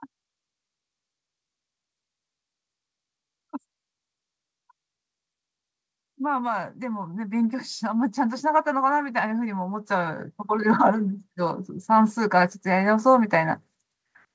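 From 6.16 s to 13.59 s the speech climbs by about 15 dB in a slow automatic gain rising, with the background noise swelling in step with the voice, which sets it apart from a speaker moving closer. The audio, carried over a call path topping out at 8 kHz, fits G.722.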